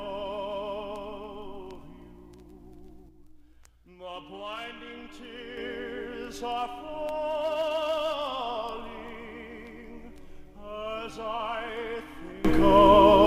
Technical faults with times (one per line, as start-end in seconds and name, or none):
3.09-5.57 sudden gain jump
12.45-13.26 sudden gain jump